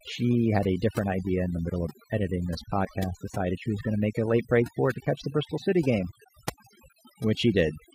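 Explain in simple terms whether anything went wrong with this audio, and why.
Overdone noise removal runs through the whole recording, from start to finish. A noise-cleaning tool was pushed too hard: it keeps switching off narrow slices of the sound whenever they look like background noise, and the softer parts of the speech get caught along with them. That is why the pauses fall to an odd near-silence sprinkled with tiny twinkling specks.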